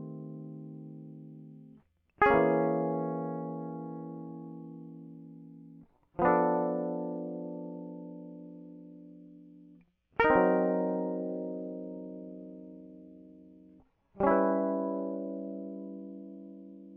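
At 6.25 s the music switches abruptly, with no gap, to an adaptive stream at a lower bitrate for the rest of the clip. The connection evidently slowed, so the player fetched a leaner encode: treble stops dead above 10.5 kHz and compression artefacts thicken, consistent with roughly 24 kbit/s AAC.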